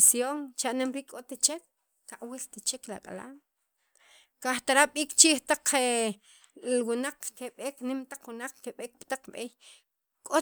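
Nothing technical goes wrong anywhere in this recording of speech, so there's no fault here to point to or explain.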